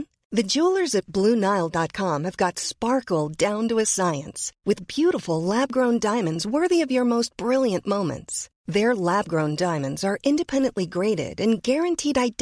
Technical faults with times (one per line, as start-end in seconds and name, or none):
none